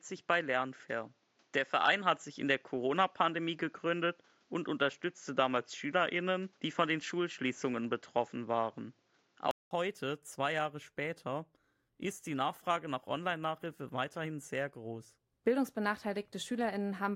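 From the start to 9.71 s, the speech sounds dull, with nothing above 7.6 kHz and faint added background noise. A 200 ms gap follows, then it clears. This is likely an input switched to a poorer device.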